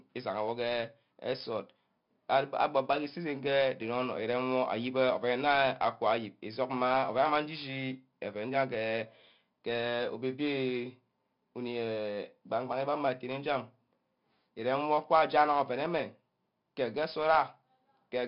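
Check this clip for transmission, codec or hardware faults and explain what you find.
One codec fault runs through the whole speech clip: 4-bit ADPCM compression. Each sample is coded as a coarse 4-bit step from a predicted value, with an adapting step size. The error is a gritty hiss riding on every loud passage, with roughness on sharp attacks where the step lags. Damage is heavy. Nothing is present above 5.3 kHz, which, with a rate near 44 kbps, fits roughly an 11 kHz sample rate and leaves the sound dull.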